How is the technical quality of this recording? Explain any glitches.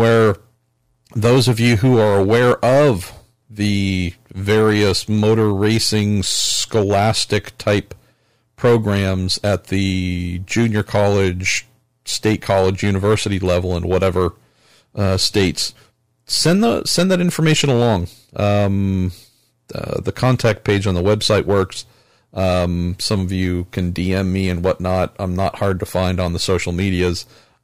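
The recording is compromised by hard clipping that runs through the whole speech clip. The signal is overdriven by about 7 dB, so the loudest peaks, a small share of samples, are sliced flat at the converter's limit. Those squared tops add high harmonics, heard as crackle on the peaks. Unlike gentle saturation, which rounds peaks into warmth, this distortion is abrupt and gritty.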